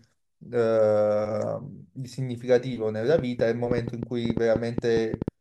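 From 3.19 s to 5.29 s a train of clicks rides over the speech: about fifteen sharp, similar ticks at roughly 6.7 per second, unevenly spaced and poking well above the voice, pauses included. Likely nearby interference or a struggling interface.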